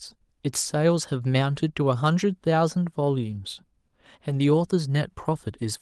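At 3.29 to 3.31 s, then 4.29 to 4.35 s, a lost packet rebuilt from error correction: the decoder played low-bitrate backup copies, so there's no gap. Those spans sound briefly rougher and noisier, showing as smeared, grainier patches on a spectrogram, the second span's length fitting two separate packets.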